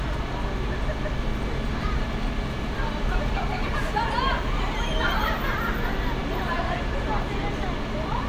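No technical fault is audible anywhere in the recording.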